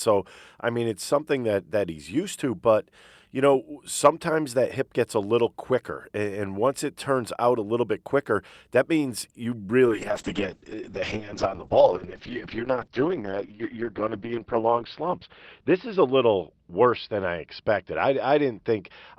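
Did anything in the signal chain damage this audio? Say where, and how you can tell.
Yes, a call bitrate drop in the codec stage: from 9.87 s the rate falls from 64 to 6 kbps, cutting the 20 kHz bandwidth to 6 kHz, so the speech turns rough and muffled through the end.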